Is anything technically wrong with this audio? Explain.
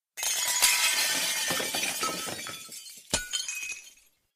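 No, nothing's technically wrong here; it's just the sounds themselves, with nothing in the recording getting in their way.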